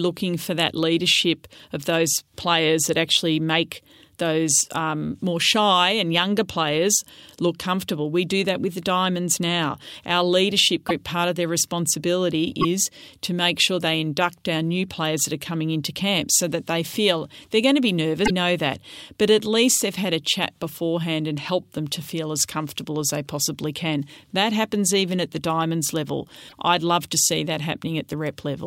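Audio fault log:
10.88–10.91, 12.61–12.65, 18.25–18.30 and 26.48–26.53 s: broken MP3 bit reservoir. Each is a short glitch, 30 to 56 ms long. They fall after "part of their responsibility", after "they're going to be", and before "I'd love to". Dropped frames likely left the following frames decoding borrowed bytes from the wrong frame, so the sound skips ahead.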